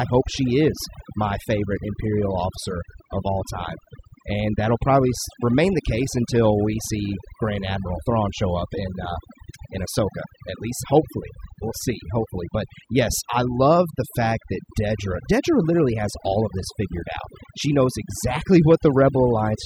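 From start to finish the background is pulled down and broken into twinkling, warbling specks that flicker in and out around the speech. This is overdone noise removal: a noise reduction process set too aggressively cuts individual frequency bands deeply, or removes them entirely, whenever their level sits close to its estimate of the noise. Quieter parts of the speech fall under that threshold as well and are removed along with the noise.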